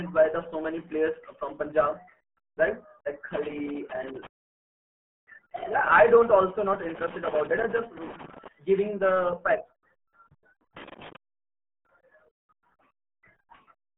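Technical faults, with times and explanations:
throughout: RealAudio 14.4 codec. The speech has been squeezed through RealAudio 1 at 8 kbit/s, a rate that keeps only a crude outline of each sound, so vowels come out muffled and gargly and consonants lose their edges. Nothing passes above 3.8 kHz, and the low end thins below about 150 Hz. On a spectrogram the energy stops at a flat ceiling near 3.8 kHz, with smeared, blotchy harmonics beneath it.
6.83–8.48 s and 10.77–11.16 s: loose connector crackle. The first burst comes after "don't also not" and clears before "giving the facts"; the second is shorter. A worn or dirty contact is making and breaking irregularly, chopping the signal on and off, which is heard as ragged scratching over the speech. The waveform shows jagged gaps and spikes in the envelope, and the spectrogram shows scattered thin vertical streaks running up to the 3.8 kHz ceiling.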